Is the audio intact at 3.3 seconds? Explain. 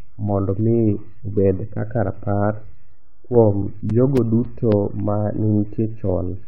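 No. At 3.3 s the audio carries CD scratch ticks, which run from 3.07 to 5.00 s, just after "mi obed kaka rapar". A surface scratch overwhelms error correction once per revolution, so the player patches the gap, giving eight brief ticks of a few milliseconds each, roughly four per second.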